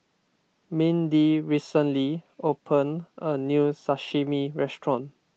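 The speech carries no audible technical faults.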